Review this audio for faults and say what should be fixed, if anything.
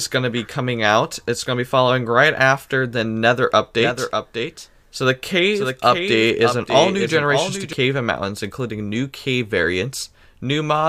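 There's a doubled audio track from 3.81 s to 7.73 s. A second full-band copy of the speech trails by roughly 0.7 s, around 5 dB quieter, with no room colour, and it cuts in and out abruptly. That's likely a second capture through a slower path or an edit holding two offset copies.

To prevent it, make sure only one input route feeds the mix and check edits for overlapping duplicate regions.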